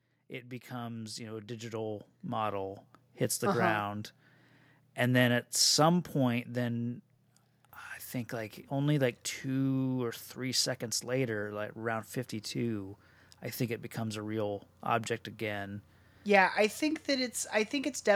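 From 0.68 s to 4.11 s, automatic gain rising lifts the speech and the background noise together by about 11 dB, as the gain control answers a quiet input with a slow boost. The waveform envelope widens steadily, and the spectrogram brightens evenly across all frequencies.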